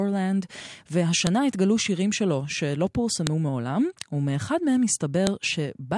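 File header played as audio shows up at 1.27 s, 3.27 s and 5.27 s in this speech clip, each a sharp, loud click lasting about a millisecond. The clicks land exactly 2.0 s apart, regardless of what the speech is doing, which points to the audio being assembled from 2-second pieces whose WAV headers were never stripped. Each piece's header bytes get decoded as sample values, producing a brief burst of garbage at every join.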